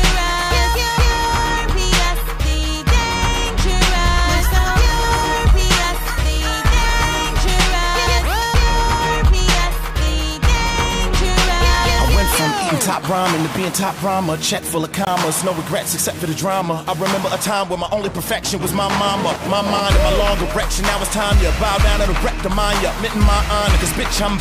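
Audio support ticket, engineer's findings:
Dropout to silence at 15.05–15.07 s, about 20 ms, then playback resumes. Bluetooth stall on the wireless link, likely interference delaying packets until the headphone buffer emptied. Audio paused until retransmitted packets arrived.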